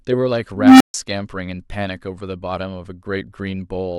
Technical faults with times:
0.55-0.94 unstable filter

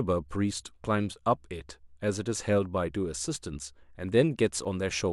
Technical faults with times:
0.79-4.65 clock drift buffer slips

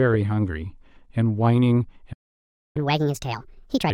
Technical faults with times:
2.12-2.77 playback stall
2.77-3.90 catch-up at higher speed

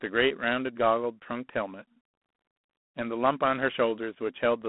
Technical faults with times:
0.00-4.68 G.726 ADPCM

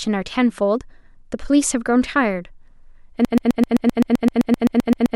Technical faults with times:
3.25-5.16 broken-record loop

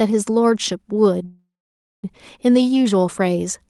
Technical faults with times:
1.25-2.05 call audio freeze

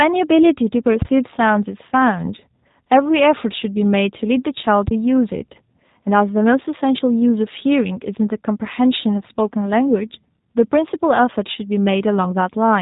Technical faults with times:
0.00-12.82 G.729 codec
1.02-1.19 phantom power thump
4.88-5.01 phantom power thump

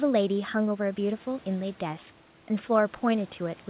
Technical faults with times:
none

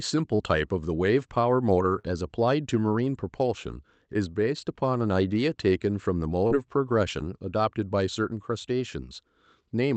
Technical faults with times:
0.35-0.42 short concealed packet loss
1.99-2.06 short concealed packet loss
6.47-6.54 short concealed packet loss

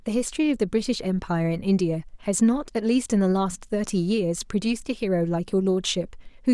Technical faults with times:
none

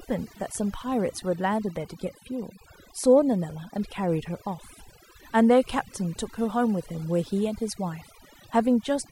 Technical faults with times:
0.00-9.12 overdone noise removal

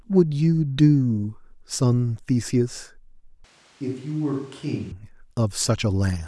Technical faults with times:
3.44-4.91 switch to a distant microphone

